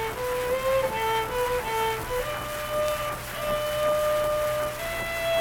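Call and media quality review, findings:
No faults found on review. Playback runs without any detectable impairment.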